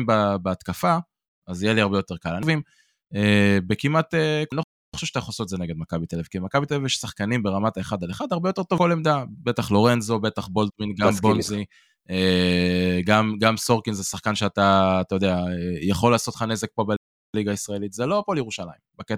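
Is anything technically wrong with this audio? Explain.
Yes, there are two playback stalls in this speech: it cuts to silence from 4.63 to 4.94 s and again from 16.96 to 17.34 s, roughly a third of a second each, then carries on. The player likely ran short of data or got blocked.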